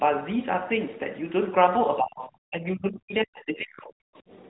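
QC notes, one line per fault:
1.99–4.27 s, speech suppressed in double talk. From 1.99 s the speech dips and breaks up in pieces, with the deepest drops roughly 40 dB down. About two seconds of it is affected in all. The likely cause is an echo canceller meeting both sides talking at once. It could not tell this talker from the loudspeaker echo, so it pulled both down. The band-limited sound of the narrowband mobile codec carries on through the dips.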